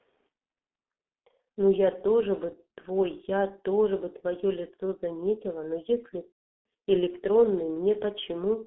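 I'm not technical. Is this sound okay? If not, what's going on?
No. The whole clip went through the G.723.1 codec, an old internet-phone squeeze that cuts the highs and lows, so the speech sounds muffled, hoarse and smeared. At about 6.35 to 6.62 s there's VoIP packet loss concealed by the speech codec: chunks went missing, the decoder guessed, and you get a fading smear that then goes silent.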